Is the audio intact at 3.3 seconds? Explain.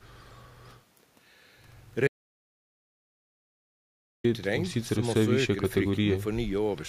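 No. At 3.3 seconds the clip sits inside an audio dropout to silence running from 2.08 to 4.24 s. The input signal was likely lost, through a disconnected device, a failed link or an accidental mute, while the recorder kept writing silence. The speech cuts off abruptly at 2.08 s and resumes mid-flow at 4.24 s, leaving about 2.17 s of silence with no room tone, and whatever was said in that stretch is gone.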